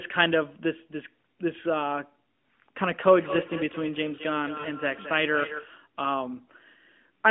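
It's a speech clip. From 3.07 to 5.78 s there's feedback echo between two devices: the sound comes back roughly every fifth of a second, peaking about 10 dB under the speech. Around 4.60 to 4.66 s you get about 40 ms of lost AMR speech frames, which points to two dropped 20 ms frames, so the decoder briefly smears and dips before recovering. All of this sits on a narrowband AMR phone line with a 200 to 3400 Hz band and light codec colouring.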